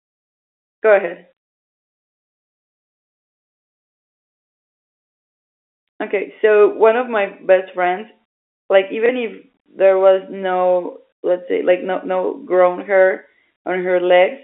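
Speech carried over a G.711 telephone channel, with the narrow band of roughly 300 Hz to 3.5 kHz that the format implies. At 9.06 to 9.09 s, right after "my best friends like", there is a brief packet loss with the last packet repeated. The receiver replays the previous 30 ms of audio to fill the gap, which fits a single lost packet. Because the replayed segment seldom aligns with the pitch cycle, the single repeat is heard as a small blip.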